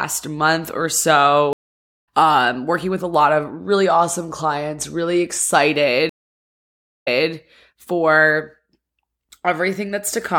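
Speech with two stream reconnects. At 1.53 s, 0.54 s of silence ends with the audio resuming about half a second further on. At 6.09 s, 0.97 s of silence ends with 0.24 s replayed. Unlike a plain dropout, the sound jumps position after each gap.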